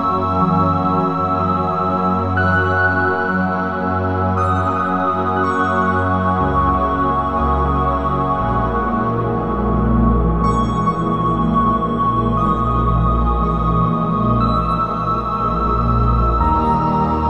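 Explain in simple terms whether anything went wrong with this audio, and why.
Nothing went wrong with this audio, because there is no fault anywhere in it that a listener would notice.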